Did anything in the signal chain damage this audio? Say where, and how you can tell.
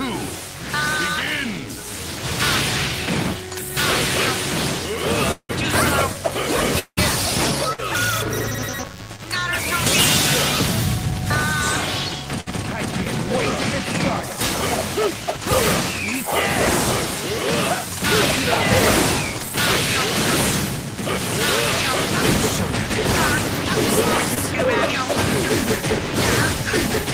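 Yes. Damage enters at two stages: analogue interference in the wiring, and packet loss on the network path.

DECT cordless phone buzz sits under the whole recording, in the analogue stage. A nearby DECT handset or base transmits a short radio burst every 10 ms, and the audio circuit rectifies that burst into the audio path. The result is a thin, constant buzz at 100 Hz with a dense stack of harmonics. It stays well below the programme, roughly 25 dB down, but it never stops.

Two long network dropouts occur, from 5.31 to 5.51 s and from 6.79 to 6.99 s. Each time, about 180 ms of audio fails to arrive. The receiver extends the last sound as a decaying buzz or hiss for most of that span, then goes quiet for about 60 ms before the audio picks up further along. The content from those stretches is gone. A stall on the network is the likely cause.

Bursts of packet loss hit at 7.73 to 7.80 s and at 12.40 to 12.48 s. 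Each loses about 60 ms of audio. The receiver holds the last sound as a sustained tone or a fading hiss for roughly 50 to 60 ms, turning it down as the gap runs on. The audio then resumes past the gap, and the missing section is never recovered.

Short concealed packet loss appears at 9.16 to 9.20 s and at 24.34 to 24.38 s. About 20 ms fails to reach the decoder in time. Concealment patches the hole by continuing the previous sound, from its pitch or as shaped noise, and then cross-fades back into the real signal. What you hear is a brief smear or wobble.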